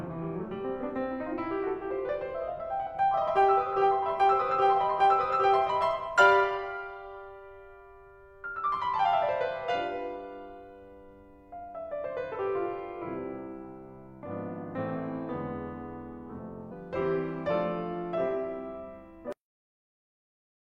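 The music is hit four times by damaged data in the compressed stream: at 3.25 to 3.30 s, 9.01 to 9.06 s, 12.31 to 12.37 s and 16.68 to 16.73 s. Each burst lasts about 50 to 60 ms. Bytes in the stream are wrong at those points. The decoder misreads the frames, loses its place and hunts for the next valid frame header. Each event is heard as a brief glitch in the music, a chirp, squawk, click or short hole.

At 19.32 s the audio has a cut-off end. The music stops in the middle of a sound. There is no decay or fade. It drops straight to digital silence, which lasts the final 1.4 s. The last stretch of audio was never written or played out. The sound that was playing is simply abandoned, not finished.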